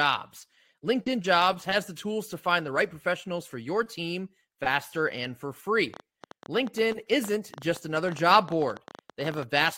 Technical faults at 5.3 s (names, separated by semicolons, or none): none